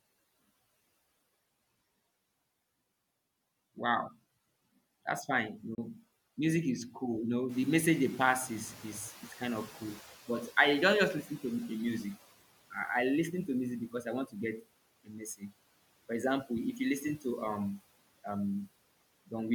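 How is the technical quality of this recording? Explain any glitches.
The recording has three kinds of glitch: one short dropout, a slow noise-reduction recovery after the background gets louder, and two spots where the noise suppressor clips the speech.

From 5.75 to 5.78 s, just before "music is cool", the audio drops out for about 29 ms. This is likely a Bluetooth dropout, and the length fits a couple of lost packets. The waveform shows a flat gap. The spectrogram shows a thin vertical blank stripe.

Around 7.5 s the room noise jumps by about 10 dB. The noise suppressor is slow to catch up. From 7.49 to 12.1 s, up to "I I listen to", the noise passes through louder than it should, then fades as the suppressor adapts over 4.6 s, ending about 12 dB lower. On a spectrogram the broadband haze brightens suddenly and then dims gradually.

The noise suppressor also cuts speech twice. From 14.26 to 14.35 s, right after "I want", it pulls the sound down by up to about 14 dB for roughly 100 ms. 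From 15.05 to 15.52 s it dips by up to about 18 dB for roughly 300 ms. Both times it mistakes speech energy for noise, so the sound seems swallowed. The waveform shows dips in the envelope, and the spectrogram shows weaker, faded speech energy in those spans.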